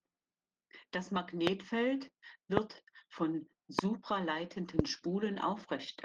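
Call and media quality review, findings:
Opus voice compression, whole clip: speech muffled, hoarse, slightly robotic, plainly audible. Fits Opus hybrid mode near 16 kbps, SILK coding the low band coarsely, thin CELT layer above 8 kHz. Steady throughout, with no gaps or stutters, so not packet loss.

Loud pop, four single pops: 1.47–1.49 s, 2.57–2.59 s, 3.79–3.81 s, 4.79–4.81 s. Each about 25 dB above the speech, about 20 ms long, speech continuing underneath. Likely a voltage step from a connector, switch or static discharge. Brief added pulses with no missing audio, unlike dropouts.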